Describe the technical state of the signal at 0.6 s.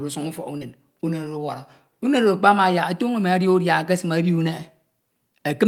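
Right at 0.6 s there's a short concealed packet loss, running from about 0.57 to 0.63 s. Roughly 40 ms of the speech never arrived in time, so the receiver patched the gap by stretching out what it had just heard, synthesising about 34 ms of fill before easing back into the real signal. What you get is a quick smeared wobble in the speech, and any small consonant sitting in that gap can go missing.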